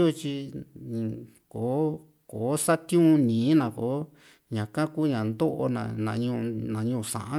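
No technical faults can be heard anywhere in the speech. Nothing in the recording calls for comment.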